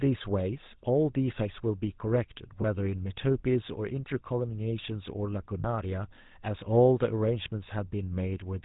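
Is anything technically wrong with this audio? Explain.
Yes. Throughout, the speech has a buzzy, gravelly roughness with nothing above 4 kHz, the plainly audible mark of the GSM full-rate codec, consistent with its 13 kbps rate. It rebuilds the voice from a vocal-tract model driven by regularly spaced pulses, keeping only a third of the excitation samples.

At 2.62–2.65 s and 5.60–5.65 s there are brief rough, metallic rings, from lost GSM frames: about 20 ms, then 40 ms, fitting one and two frames. The decoder repeated the last good frame's settings, holding the sound.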